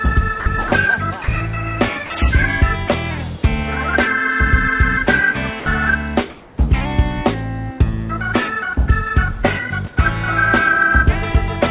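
A narrowband sound path with nothing above 4 kHz, consistent with a G.711 call codec, carries five short sound dropouts from the voice detector. At 0.40–0.46 s, 0.68–0.72 s, 1.24–1.28 s, 2.06–2.10 s and 5.60–5.66 s, 40 to 60 ms of sound gives way to a flat noise burst before resuming. The likely cause is the sender's voice detector misjudging quieter moments as background, halting transmission, so the receiver filled each gap with comfort noise until the detector triggered again. Between 6.30 and 6.58 s, comfort noise replaces the background: for 280 ms the real background, sitting about 27 dB below the loud passages, turns into a steady, featureless hiss at the same level. This is likely discontinuous transmission during a pause, with the receiver synthesising noise shaped to the background instead of playing the actual ambience.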